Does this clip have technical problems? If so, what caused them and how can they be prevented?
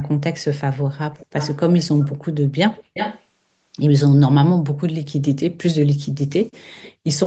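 Yes. Echo leak at 1.18–1.57 s, 1.77–2.16 s and 2.74–3.22 s: a delayed copy of the speech trails by about 0.36 s, roughly 15 and 20 dB below the speech in the first two and much louder in the third, only about 5 dB below. This is likely a loudspeaker on the far end whose echo canceller let its microphone pickup return into the call. Using a headset, lowering speaker volume, or improving the echo canceller's alignment and suppression would prevent it.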